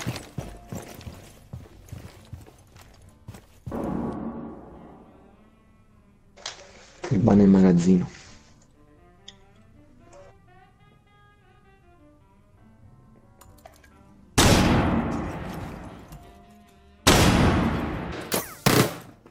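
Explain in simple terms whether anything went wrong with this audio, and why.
Right at the end, from 18.12 s to 19.31 s, something does go wrong: the audio gets read two samples at a time, so it plays at double speed. The player treats each pair of samples as a single step, as if it expected two channels or wider samples, and races through that last stretch twice as fast and a full 12 semitones (an octave) higher.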